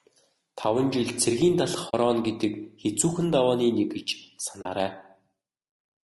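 Throughout the speech, the sound is rough and grainy, with noise filling the gaps between the pitch harmonics and a thin, synthetic top band. This is plainly audible codec damage, likely from low-delay AAC compression of the AAC-ELD kind used for video calls, at a bitrate around 32 kbps. Its short frames resolve harmonics poorly, so at that rate the encoder cannot spend enough bits to keep the harmonic structure clean, and quantisation noise spreads between the partials.

At 1.89 s, just before "гэдэг хэцүүхэн давааны нэг", and again at 4.61 s, just after "хэцүүхэн давааны нэг гэж", there is AAC frame loss with muting. Each time, about 40 ms of audio, roughly two frames' worth, drops out. The decoder zeroed the missing spectrum, and the overlapping windows fade the sound down and back up around each gap. The result is a soft-edged hole.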